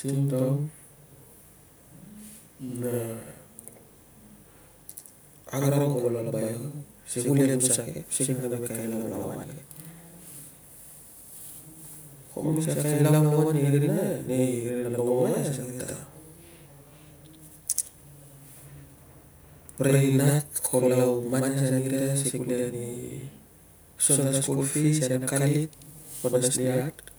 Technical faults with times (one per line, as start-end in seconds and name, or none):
0.00-27.18 channel delay (doubling)